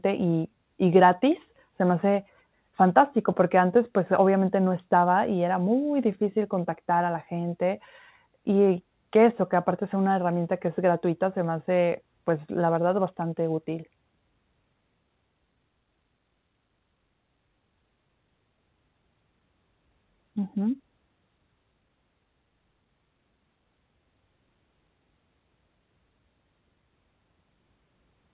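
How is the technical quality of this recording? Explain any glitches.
No glitches to speak of here: the speech just has the narrow, phone-like sound of a call line with nothing above 4 kHz, which fits an ordinary G.711 mu-law connection running at 64 kbps.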